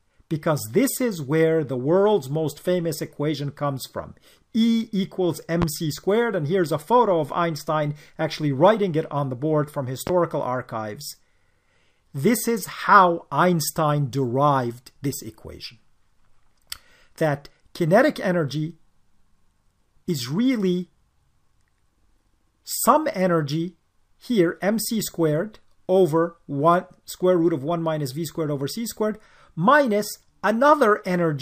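A loud pop at 5.62 to 5.65 s, then another at 10.07 to 10.11 s: each is a single sharp thump, roughly 15 dB and then 10 dB above the surrounding level, with the sound continuing underneath, likely from a sudden voltage pulse such as a switch or static discharge.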